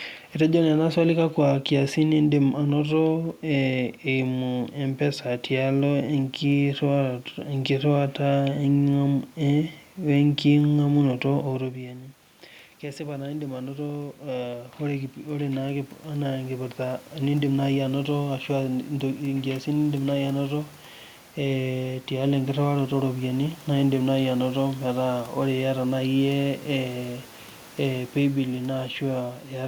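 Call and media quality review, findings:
Automatic gain rising, 11.31 to 18.18 s. Speech level drops about 17 dB as the talker moves back from the mic around 11.5 s. AGC then ramps gain up about 11 dB over roughly 7 s. Voice and room noise swell together. Probable component: capture-side AGC recovering a quiet input.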